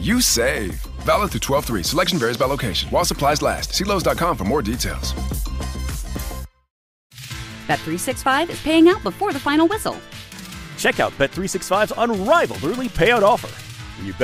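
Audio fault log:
12.89 to 13.94 s: drift correction step. The sound abruptly slows by about 5.4 percent and drops about 95 cents, nearly a semitone, for roughly one second, then snaps back. Likely cause: clock-matching software stepped the playback rate to rebalance its buffer.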